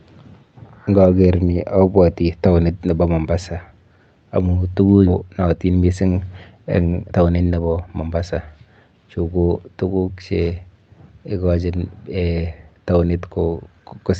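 At 5.05 to 5.07 s the audio makes a skip ahead: about 0.7 s of speech is simply gone, and the two sides are butted together with no gap or fill. On a waveform the envelope changes abruptly at the seam, and a spectrogram shows harmonic tracks jumping discontinuously.

Shortly after, from 5.21 to 5.94 s, a jitter buffer speed-up trims repeated pitch-period slices to drain built-up delay, making the speech run at about 114% speed, around a tenth of a second shorter, hurried but at unchanged pitch. A second speed-up from 6.85 to 8.16 s runs at about 118%, removing roughly 0.2 s. On a spectrogram the harmonic spacing stays constant while syllables are compressed in time. Throughout, energy stops at 8 kHz, as expected from the Opus call codec.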